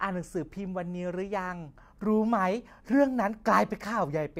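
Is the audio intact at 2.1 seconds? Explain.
Yes, at 2.1 seconds the speech is intact, with no fault audible at that moment.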